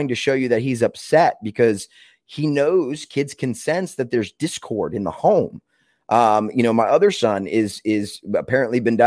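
Listening to this speech recording, nothing technical stood out as wrong at any point.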